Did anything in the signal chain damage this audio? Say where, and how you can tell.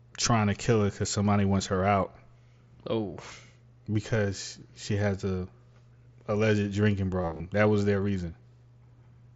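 Yes. Concealed Bluetooth headset packet loss at 7.22 to 7.40 s, just after "alleged drinking", in the wireless link of the mSBC headset. Roughly 130 ms of audio went missing in short gaps of up to 30 ms, each patched by repeating a matching stretch of the preceding waveform.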